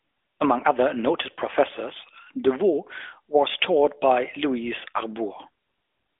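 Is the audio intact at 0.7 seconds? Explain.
No. At 0.7 s, as throughout the clip, the speech has passed through an AMR narrowband mobile codec, consistent with a mid-rate mode near 10.2 kbps, which rebuilds the voice from a vocal-tract model. The band is squeezed to 250 Hz–3.5 kHz, nothing above 3.7 kHz, so the speech sounds muffled, buzzy and audibly synthetic.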